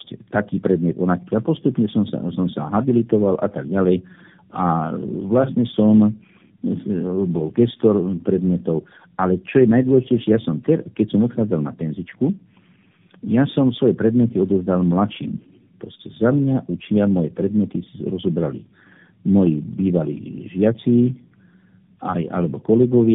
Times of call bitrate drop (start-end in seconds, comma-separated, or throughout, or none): none